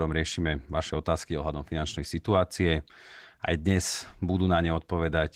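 Opus voice compression affects the speech throughout. Coarse low-rate coding makes it plainly hoarse and slightly robotic. That fits a bitrate around 16 kbps.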